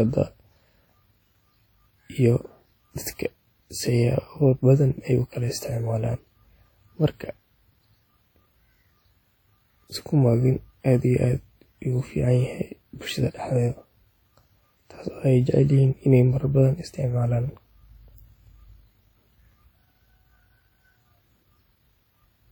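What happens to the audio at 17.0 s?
At 17.0 s, as throughout, the speech rings and sounds washy with hiss that breathes with it, likely WMA compression, its long transform blocks smearing quantisation noise at a bitrate that fits about 48 kbps. Unlike band-limiting, content still reaches 20.1 kHz.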